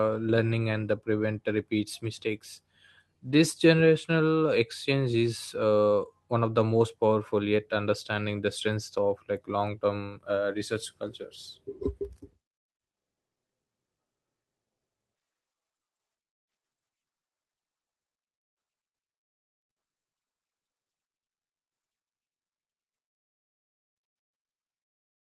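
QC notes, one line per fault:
No faults found in this speech clip; it has been through a call path whose coding leaves the top end rolled off above roughly 12 kHz.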